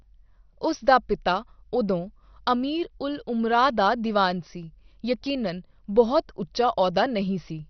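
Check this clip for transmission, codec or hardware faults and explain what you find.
One codec fault runs through the whole speech clip. From start to finish, nothing is present above 6.2 kHz, and what remains carries heavy gurgling, granular distortion. The likely cause is MP2 compression at a rate consistent with about 48 kbps. Layer II, short of bits across its 32 sub-bands, switches off the upper bands and coarsely quantises the rest, leaving the sound dull and churning.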